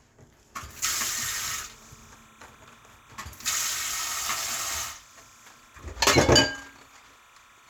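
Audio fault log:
1.23–7.70 s, timecode bleed: A steady chirping warble appears behind the sound and runs to the end. Linear timecode from a nearby track or cable is leaking into the audio. The code is a square wave that flips between two pitches, near 1 kHz and 2 kHz. Its pattern repeats at 29.97 frames per second, giving the rapid, buzzy flutter. It sits roughly 30 dB below the wanted sound, so it stays faint but constant.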